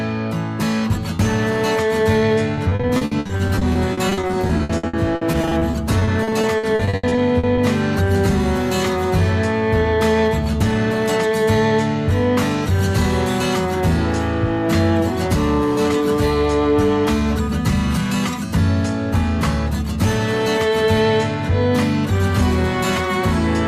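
From about 2.55 s to 7.59 s the audio breaks up into a choppy, robotic texture, which is classic repeated packet loss. Dozens of short dropouts land one after another, each patched by stretching out the last bit of sound before it, with the longest hole around 80 ms. Altogether roughly 1.4 s of that five-second stretch is concealment rather than real audio, close to a third of it, so pieces are audibly missing.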